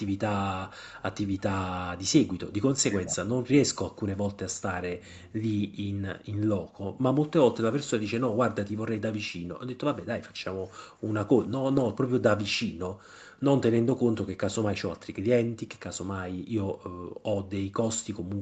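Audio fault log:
2.88–3.42 s, speech suppressed in double talk: the talker's level dips in pieces, falling by roughly 30 dB at its deepest, for around 0.3 s in all. The likely cause is an echo canceller that heard both sides at once and turned the near talker down along with the echo. Unlike a packet loss, the sound isn't made rougher or noisier; it simply gets quieter and choppier, then recovers.
11.63–11.85 s, lost packet rebuilt from error correction: about 120 ms of audio is played from the low-bitrate backup copies that Opus carries in the following packets, which points to around six lost packets. There is no gap or dropout, and no buzzy, stretched concealment tone. The stretch just sounds coarser and noisier than its surroundings. The audio already stops at 8 kHz on this call path, so no further loss of top end stands out.
16.35–17.45 s, background gated by the echo canceller: the room sound is pushed down hard while the far side's loudspeaker plays, by about 40 dB at the deepest point, for roughly 0.7 s within that span. 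It comes back once the canceller releases. Unlike double-talk suppression, this cut falls on the ambience rather than on the active talker, so it is heard as the background briefly vanishing into near silence.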